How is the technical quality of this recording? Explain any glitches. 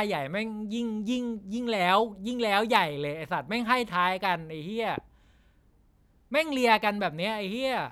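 There's one clear glitch: a single loud pop in the speech from about 4.98 to 5.00 s. It's a short, sharp crack that jumps roughly 10 dB above the speech level, and the talking carries on right through it. The likely cause is a sudden voltage spike, from a cable or plug being knocked, a switch, static, or a driver hiccup, that got added to the signal and was then shaped by the following circuitry into that brief thump.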